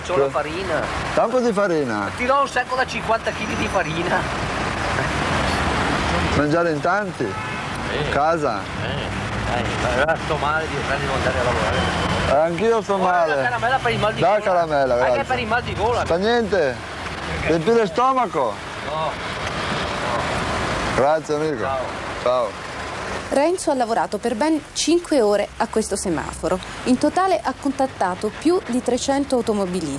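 No technical faults can be heard anywhere in the clip. There is nothing in the audio that points to a problem in how it was captured or delivered.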